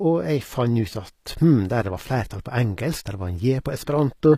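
Speech, with HE-AAC compression damage plainly audible throughout: the treble stays bright but sounds synthetic, and s sounds turn gritty and lispy, likely from spectral band replication at a low rate near 24 kbps. Unlike a plain low-pass, the highs remain but fail to match the lower harmonics.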